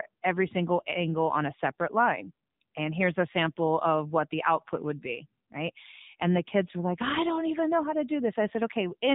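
From start to finish the speech carries plainly audible AMR narrowband mobile codec damage: nothing above 4 kHz, with a buzzy, synthetic vocal-tract rendering that fits a low mode near 7.4 kbps. That synthetic buzz, not merely the missing top, separates it from a simple low-pass filter.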